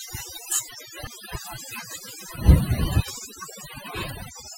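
Overdone noise removal runs through the whole speech recording. The noise reducer was set too hard. It pushed individual frequency bands down whenever they sat near its noise estimate. Quiet parts of the voice went too. The background drops and breaks up into twinkling specks.

From 1.07 to 1.10 s, there is damaged data in the compressed stream. Part of the encoded data was corrupt. The decoder misread those frames and lost sync before finding the next valid frame. It comes through as a brief chirp or blip.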